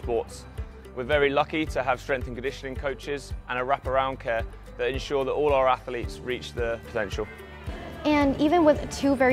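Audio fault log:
No faults in this clip.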